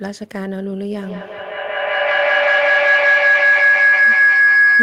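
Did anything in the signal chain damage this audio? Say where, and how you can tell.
Yes, a feedback howl at the call stage, running from 0.99 s to the end of the clip. Two devices sharing a room form a microphone-to-loudspeaker loop with more than unity gain, so each pass adds level. The repeats narrow onto a tone around 1.5 kHz, recurring about every fifth of a second, and peak about 12 dB above the speech. A spectrogram shows a bright horizontal line near 1.5 kHz that brightens over time, and the waveform swells.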